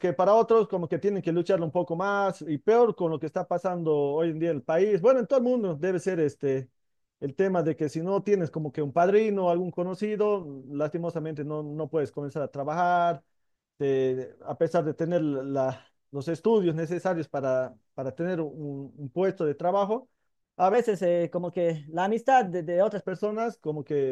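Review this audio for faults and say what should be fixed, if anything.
From 20.74 s to 23.03 s the speech jumps into a section at the wrong speed: it runs 1.12 times faster than the surrounding audio, so for those two-odd seconds the voice is hurried and sits about two semitones higher, then drops back to normal. Because pitch and tempo shift together, this is a playback or resampling rate mismatch, likely from that segment being rendered or pasted against the wrong clock rather than any change at the source. Fix it by resampling the segment to 1/1.12 of its current speed, or by replacing it from the original recording. To prevent it, confirm every imported or edited segment shares the session's sample rate before rendering.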